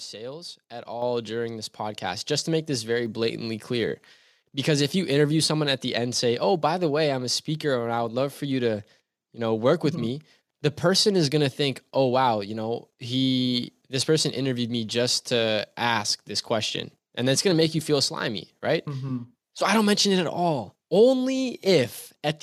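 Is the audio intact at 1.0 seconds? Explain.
No. At 1.02 s the microphone volume stepped up by about 7 dB. The call software judged the input too quiet and raised the device's gain in one jump. Speech and background get louder together, just before "during this".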